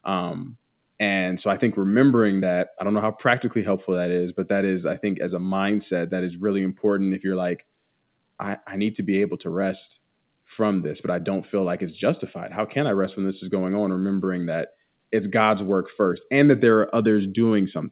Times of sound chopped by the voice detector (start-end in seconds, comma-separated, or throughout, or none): none